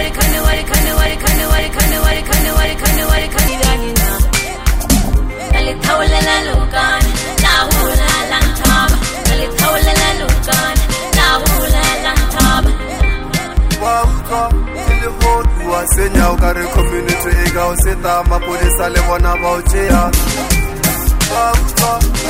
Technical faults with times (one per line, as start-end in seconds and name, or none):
0.00-22.29 hard clipping
0.00-3.48 broken-record loop